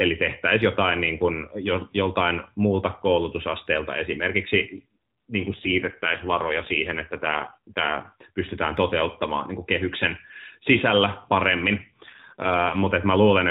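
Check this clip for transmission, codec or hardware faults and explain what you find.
Two stretches of AMR rate drop stand out, from 5.5 to 8.2 s and from 11.8 to 12.9 s. In each, the speech turns rougher, buzzier and more synthetic, with no gap and no change in bandwidth, then clears again. The audio is narrowband AMR mobile speech throughout, and these stretches sound like the link forcing the codec to a lower rate, consistent with a step down from about 12.2 to 5.9 kbps, with the freed bits going to error protection.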